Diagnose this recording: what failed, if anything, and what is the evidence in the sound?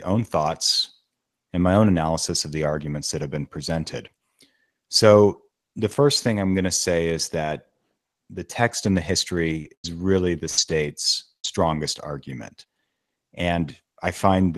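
Repeated packet loss (robotic sound) at the network stage, from 9.61 to 11.46 s. Four separate holes open in the stream, the longest 97 ms, with about 280 ms of audio missing in total. The receiver patches each one by extending the last sound, which gives the speech its choppy quality with pieces missing. On a spectrogram this shows as short frozen, smeared bands of repeated harmonics with hard edges, all below the Opus call path's 12 kHz ceiling. The waveform shows flattened, repetitive stretches between abrupt joins.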